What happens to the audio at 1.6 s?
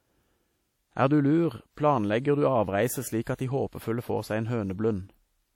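At 1.6 s the speech sounds washy and ringing, with a hiss that swells and fades with the voice, as it does throughout the clip. This is likely WMA compression, its long transform blocks smearing quantisation noise, which fits a low bitrate around 48 kbps.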